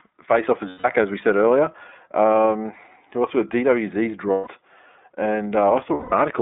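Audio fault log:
throughout iLBC codec: band-limited, slightly rough and synthetic speech, nothing above 3.7 kHz; 30 ms frames coded independently, which fits a bitrate near 13 kbps.
0.69–0.85 s, 4.31–4.48 s, 5.94–6.13 s lost iLBC frames: a held, buzzy vowel for 150–180 ms, where the decoder repeats the last pitch cycle with noise, then the voice is right again almost at once.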